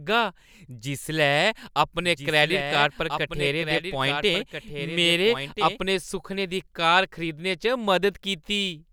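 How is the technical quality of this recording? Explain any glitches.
The recording has one glitch: a doubled audio track. From 2.03 to 5.79 s, a second, slower capture path likely mixes in a late copy, so the speech repeats roughly one and a half seconds behind, around 10 dB quieter, dry and cutting in and out abruptly.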